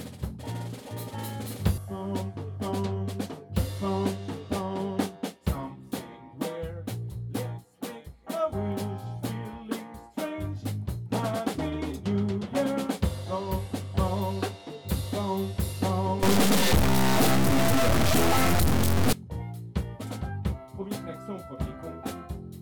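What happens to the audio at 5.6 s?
Nothing goes wrong at 5.6 s: the audio there plays through intact, with no dropout, click, distortion or other fault.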